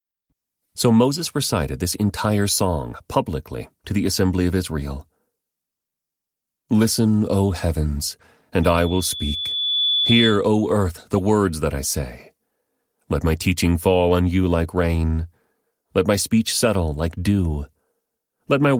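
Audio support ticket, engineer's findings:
Loudspeaker feedback squeal, 8.63–10.44 s. A 3.4 kHz tone swells over about a second to about 5 dB above speech. Mic hears its loudspeaker. Loop gain exceeds one at 3.4 kHz, so the tone self-sustains until the loop breaks or the amp limits.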